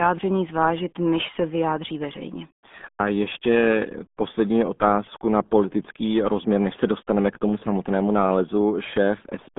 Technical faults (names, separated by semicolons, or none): RealAudio 14.4 codec